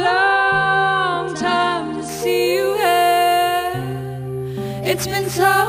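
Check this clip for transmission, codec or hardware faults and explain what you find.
One fault is present: imaging from sample-and-hold upsampling, running from 2.09 s to the end of the clip.

From 2.09 s, the audio appears to have been raised from about 22 kHz to 44.1 kHz by repeating each sample with no smoothing filter. That leaves a mirrored copy of the spectrum between 11.03 and 22.05 kHz, about 21 dB below the signal. It is heard as a bright metallic fizz that rises and falls with the sound. On a spectrogram, the upper band shows an inverted mirror of the lower content. In a zoomed waveform, the samples form small steps.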